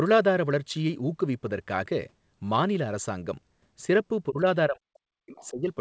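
At 4.29 s the talker's level dips for about 150 ms, down by around 15 dB, before recovering at 4.44 s. Then from 4.68 s right through to the end of the clip the speech is pushed much harder, something like 40 dB down at its deepest. That's speech suppressed in double talk, likely the echo canceller hearing both sides at once, failing to tell the talker from the loudspeaker echo, and ducking everything together.

In that same suppressed stretch, from 5.35 to 5.47 s, a faint scrap of the other side's voice leaks through, sitting roughly 25 dB under the speech level. It's short and quiet, more a brief ghost than a clear second voice. The likely cause is the far end playing out of the talker's loudspeaker and the echo canceller not fully scrubbing it from the microphone, so a bit of residual echo survives. Like the rest of the audio, which went through the G.722 call path, it has nothing above 8 kHz.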